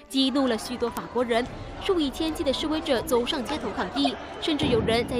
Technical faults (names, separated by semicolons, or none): bit error spike; corrupt frame decoded